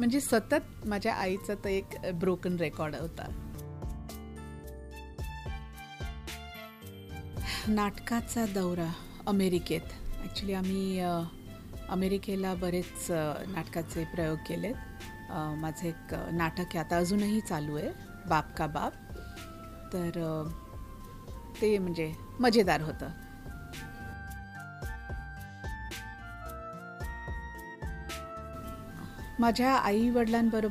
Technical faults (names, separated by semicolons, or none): none